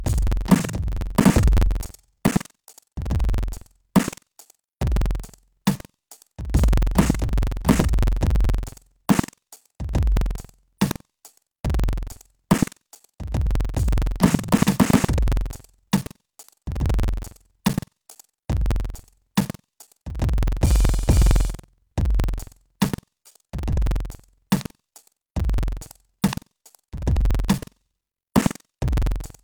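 Buffer tearing throughout the music: writer and reader have slipped, so about 15% of each 2048-sample buffer replays audio roughly a tenth of a second old, giving a 21.5 Hz rattle.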